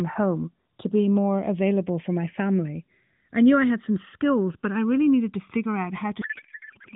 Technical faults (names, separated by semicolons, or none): channels drifting apart; codec payload misread